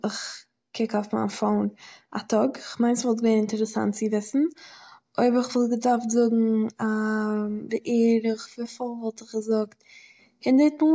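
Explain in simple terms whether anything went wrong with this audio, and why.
Nothing went wrong: the speech recording carries no audible faults at any point.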